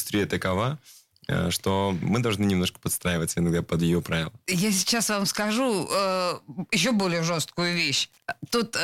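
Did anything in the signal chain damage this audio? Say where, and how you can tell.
Yes. Wi-Fi interference enters at the analogue wiring stage from 6.82 s to the end of the clip at 8.83 s. A steady ticking appears under the speech at about ten ticks per second, with one every 102.4 ms, sitting about 40 dB below the speech. That spacing matches a Wi-Fi beacon interval. A nearby radio transmitter's bursts are being picked up and rectified by the audio circuitry, which turns each beacon into an audible tick.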